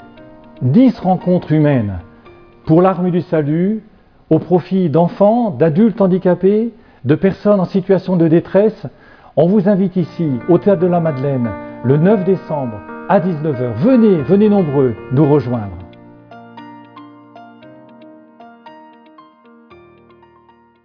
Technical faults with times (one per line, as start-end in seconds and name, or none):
none